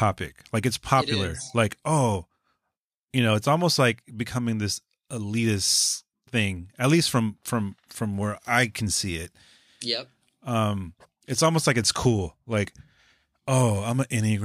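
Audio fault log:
No technical faults can be heard anywhere in this speech recording; the signal holds steady throughout.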